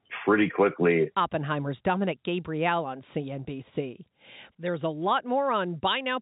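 No technical faults can be heard in this speech clip. It comes through as G.711 telephone coding, with nothing above about 3.8 kHz and at most a faint coding grain that follows the level of the voice.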